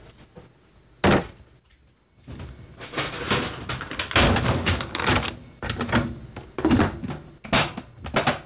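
No technical faults can be heard in this audio.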